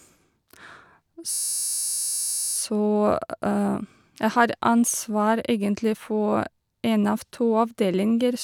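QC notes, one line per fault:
1.31–2.55 s, system hang loop: the speech freezes into a steady buzz at about 86.1 Hz. One 11.61 ms slice of the ring buffer repeats over a hundred times while the system hangs. That fits a 512-sample buffer.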